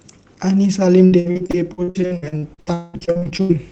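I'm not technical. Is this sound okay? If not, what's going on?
No. From about 1.05 to 3.52 s there's repeated packet loss (robotic sound): pieces of the speech keep dropping out, nearly half that stretch, with gaps up to about 0.2 s. The call software fills each hole by stretching the previous sound, so it comes out choppy and robotic.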